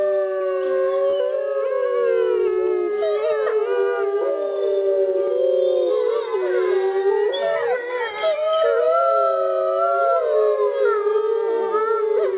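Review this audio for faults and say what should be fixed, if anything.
Three brief smears interrupt the sound at 0.38 s, 1.1 s and 3.45 s, each a short wobble lasting roughly 36 to 47 ms. This is short concealed packet loss: about 20 ms of audio, which fits one lost packet, arrived too late for the decoder, so the receiver extended the preceding sound and blended back into the real signal. This happened within a G.711 telephone-band path that carries nothing above 4 kHz. To prevent it, fix the network loss or jitter, or enlarge the jitter buffer.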